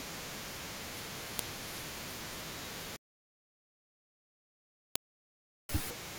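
Separate WAV pieces of this speech were joined with their headers left in, so a file header played as audio as a sharp snap at 1.39 s and 4.96 s.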